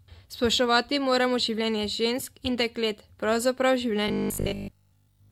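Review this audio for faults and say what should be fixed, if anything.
From 4.08 to 5.30 s the speech collapses into a rigid, metallic 50 Hz buzz that only loosely tracks the words: robotic sound from repeated short buffers. It is likely that audio arrived too seldom, so nearly all of this stretch was replaced by repeats of a 20 ms buffer. Fix it by enlarging the jitter buffer or ensuring steady delivery so playback never has to loop stale audio.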